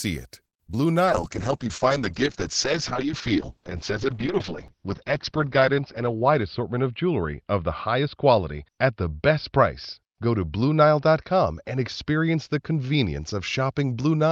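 This speech clip opens with a short stall from a late packet at 0.47–0.55 s: the jitter buffer ran dry, so the receiver held the last sound for about 58 ms before resuming. Short concealed packet loss follows at 0.67–0.77 s and 0.72–0.75 s, where 20 ms gaps were bridged with synthesized continuation, giving a brief smear or wobble. From 1.06 s to the end, a call bitrate drop from 32 to 7 kbps narrows the bandwidth from 20 kHz to 6 kHz, leaving the sound muffled and rough. A jitter buffer speed-up at 6.00–6.61 s trims about 50 ms of pitch periods, so the audio runs at 107% speed without any pitch change.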